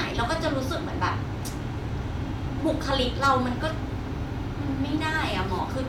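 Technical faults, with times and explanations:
No technical faults are audible in this speech.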